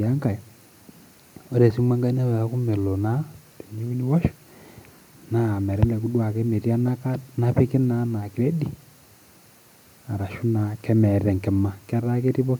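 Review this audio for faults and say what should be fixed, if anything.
No faults turn up anywhere in this speech recording. Nothing in it needs to be fixed.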